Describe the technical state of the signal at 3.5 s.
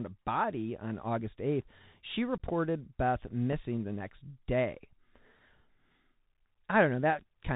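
At 3.53 s, just before "the next day", a tiny abrupt hole of about 3.8 ms appears: unconcealed Bluetooth headset packet loss, where a single dropped voice packet was filled with silence or an idle pattern. Around it, speech sounds narrowband, with scratchy s sounds and granular hiss, from the Bluetooth CVSD headset codec's 64 kbps one-bit delta coding, which passes nothing above 4 kHz.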